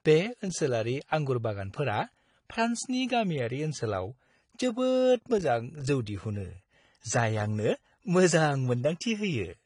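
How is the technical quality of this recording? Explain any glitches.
The recording carries audible codec damage from start to finish. The AAC compression throughout is likely from AAC-LC at a low bitrate, consistent with about 32 kbps. Nothing survives above 10.1 kHz, so the speech sounds dull, with smeared, fizzy sibilants. A spectrogram would show a flat ceiling at 10.1 kHz.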